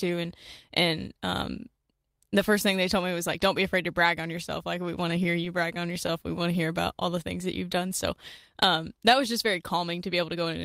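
From 4.75 s to 6.76 s, just after "to brag on yourself", the speech shows scattered short gaps. Packets went missing or arrived too late at about ten separate points, each hole lasting no more than roughly 15 ms. The receiver filled each one by extending the preceding sound, which adds up to about a tenth of a second, or around 5 percent of the stretch. The speech stays clear but picks up small ticks and brief smeared hiccups.

Overlapping that stretch, from 6.39 s to 7.9 s, a jitter buffer slow-down stretches the audio. With its reserve running short, the receiver repeated individual pitch cycles and slices of pauses many times over, inserting 91 ms in all. Playback drops to 94 percent of normal speed while the pitch stays the same. Sounds come out drawn-out.

Between 9.94 s and 10.46 s, right after "that was just very", a jitter buffer speed-up compresses the audio. The buffer was holding more than its target, so the receiver removed short pieces of one or a few pitch periods in succession, about 70 ms in total. 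The speech runs at 110 percent of normal rate with its pitch unchanged and comes across as hurried.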